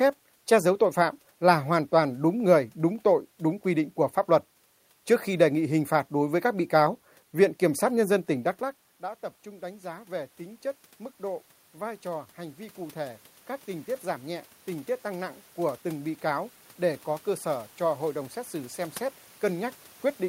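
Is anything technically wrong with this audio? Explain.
Yes. Automatic gain rising occurs twice: from 8.98 to 10.40 s, just before "chất mức", gain climbs about 3 dB, then from 11.21 to 19.79 s about 8 dB more. The talker moved away at about 8.5 s and the input fell about 17 dB. The gain control compensated slowly, so the voice and room noise swell together.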